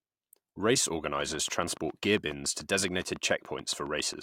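Likely equipment interference injects a train of clicks from 1.21 to 4.15 s: roughly twenty regular ticks at 7.2 per second, peaking about 5 dB above the speech.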